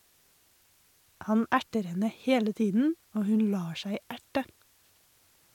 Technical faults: low bit depth with dither

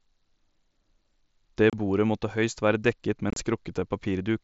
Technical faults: unconcealed Bluetooth headset packet loss

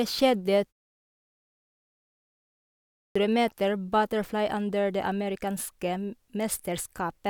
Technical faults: clipped start after a pause

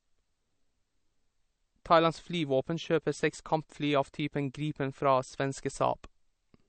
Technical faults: MP3 compression

